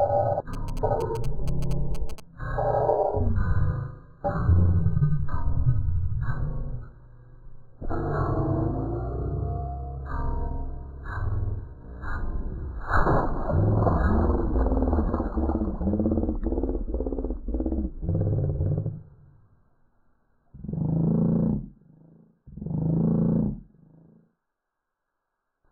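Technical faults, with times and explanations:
0.54 to 2.20 s, GSM signalling bursts: a nearby 2G phone sent short groups of radio bursts to the network, and the audio circuit rectified them into a galloping dit-dit-dit of brief 217 Hz buzzes, roughly 15 dB below the sound.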